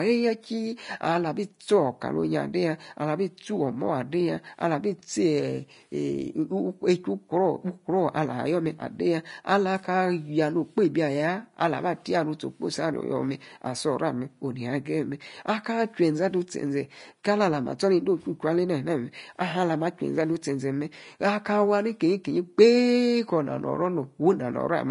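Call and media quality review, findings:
Hissy, grainy speech throughout, nothing above 10.5 kHz, treble roughened and attacks smeared. Likely Vorbis compression at low quality; coarse residue quantisation turns fine high-band detail into noise-like energy, and the damage level fits a bitrate around 32 kbps.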